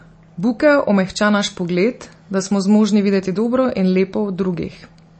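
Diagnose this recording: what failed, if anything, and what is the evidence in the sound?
The failure is at the codec stage, likely MP3 compression. Throughout the speech nothing survives above 8.3 kHz, and the sound is plainly watery, which fits a bitrate near 32 kbps. Short of bits, the encoder cuts the treble and drops weak frequency lines frame by frame. A spectrogram shows a flat ceiling at 8.3 kHz with flickering gaps below it.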